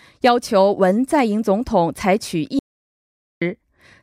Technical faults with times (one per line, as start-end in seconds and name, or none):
2.59-3.41 audio dropout to silence